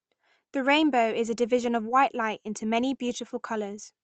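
Nothing goes wrong anywhere in this speech clip; it simply carries the sound of an ordinary call line, with the top end stopping around 8 kHz and a character that fits Opus at a modest rate of roughly 32 kbps.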